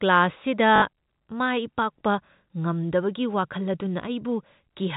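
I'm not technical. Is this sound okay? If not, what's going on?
No. Packet loss with the last packet repeated at 0.76 to 0.82 s: about 60 ms of speech went missing, and the same short snippet replayed, causing a brief robotic stutter.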